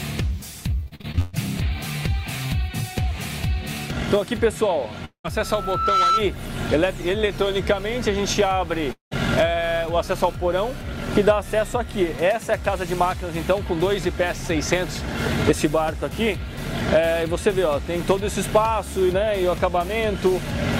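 From 0.83 to 1.35 s there is repeated packet loss, heard as robotic sound: seven short holes, the longest 137 ms, each patched by stretching the preceding sound. More than half of the span is concealed, so the audio comes out choppy and robotic, with pieces missing.

At 5.05 to 5.26 s the audio stops for about 200 ms, likely a long network dropout. The last sound is carried on as a fading buzz for most of that stretch, then about 100 ms of near-silence follows before the audio resumes with the gap simply missing.

Right after, from 5.40 to 6.25 s, a loudspeaker feedback squeal appears. A steady 1.3 kHz tone swells over roughly half a second to some 5 dB above the surrounding sound, as the microphone-to-speaker loop runs away at that frequency.

The same dropout pattern, likely another long network dropout, recurs at 8.92 to 9.13 s: roughly 200 ms lost, a decaying buzz filling the start, and about 130 ms of silence before playback continues past the missing section.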